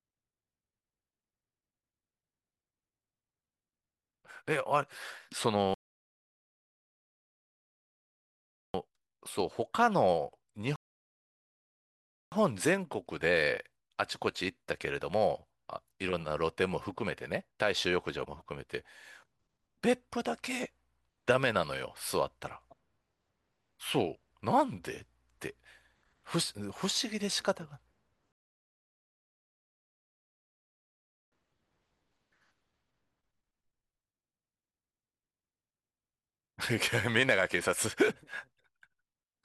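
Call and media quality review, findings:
Rebuffering stall: speech drops to dead silence, then picks up exactly where it stopped, nothing skipped. 5.74–8.74 s (3.0 s), 10.76–12.32 s (1.56 s), 28.32–31.32 s (3.0 s). Player buffer underrun; playback paused awaiting download, adding delay without losing audio.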